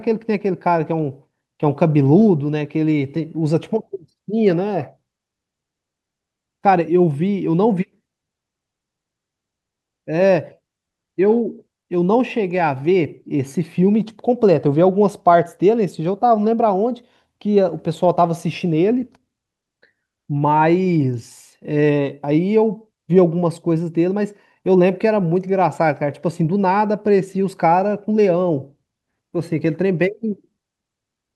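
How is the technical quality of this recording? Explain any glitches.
No glitches or faults present.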